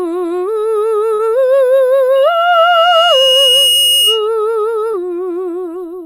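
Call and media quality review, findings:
Short concealed packet loss, 1.14–1.20 s and 4.92–4.94 s: brief smear in the music. Jitter buffer or network dropped about 50 ms, then about 10 ms. Decoder concealment extrapolated the preceding audio.

Loudspeaker feedback squeal, 2.15–4.28 s: steady 2.9 kHz tone swells over roughly a second and a half to about the music's level. Mic–speaker acoustic loop gain exceeds unity at that frequency.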